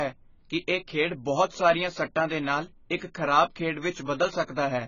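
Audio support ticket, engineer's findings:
AAC compression, throughout the 0–5 s speech. Dull, band-limited sound with nothing above 7 kHz, heavy smearing and a warbly, fizzy texture on sibilants and held vowels. Likely an AAC-LC encode starved of bits, consistent with a bitrate near 16 kbps. Encoder lowered its cut-off and coarsely quantised the remaining bands against its hearing model.

Pre-echo, 2.96–3.02 s, between "ਸਾਰੀਆਂ ਸੱਟਾਂ ਦੇ ਨਾਲ" and "ਖਰਾਬ ਖੇਡ". Brief hiss for 54 ms ahead of the attack, onset softened. Same again at 4.46–4.48 s, 26 ms. Transform block spreads noise sized for the loud onset across the quiet lead-in.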